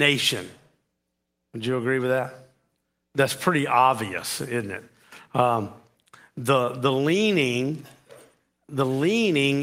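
No technical faults are audible.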